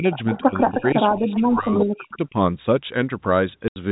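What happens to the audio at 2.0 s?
At 2.0 s the speech sits inside a dip running from 1.12 to 2.35 s, falling by as much as about 40 dB and breaking up for roughly a second in all. This is likely speech suppressed in double talk: the echo canceller, unable to separate the near talker from loudspeaker echo, attenuated both.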